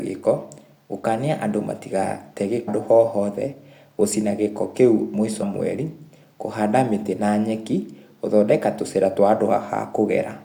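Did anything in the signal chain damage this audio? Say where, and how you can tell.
Yes. Damaged data in a compressed stream at the codec stage corrupted frames, so the decoder misread them and lost sync until the next frame header. Each event is heard as a brief chirp or blip in the speech, at 2.67 s and from 5.41 to 5.43 s.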